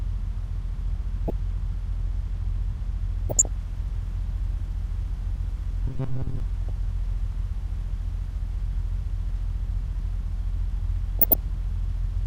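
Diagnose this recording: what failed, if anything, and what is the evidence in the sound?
DAB burbling sits at the reception and codec stage. Burbling bursts appear over the sound at 1.28 to 1.30 s, 3.29 to 3.47 s, 6.69 s and 11.19 to 11.35 s. Each burst is short and spans only a few MP2 frames. Weak reception lets a low rate of bit errors, a few tenths of a percent, slip past error correction. Corrupted samples then put short noise blips into single sub-bands, and corrupted scale factors make sub-bands jump in level for up to a frame.

The robotic sound from repeated short buffers sits at the driver or buffer stage. From 5.88 to 6.40 s the sound turns into a rigid, metallic buzz at 133 Hz that still loosely tracks the underlying audio. The likely cause is audio arriving too seldom, so the playback side fills gaps by looping the last fragment of roughly 7.5 ms. Most of that stretch is repetition rather than new audio, and the loop length sets the fixed buzz pitch.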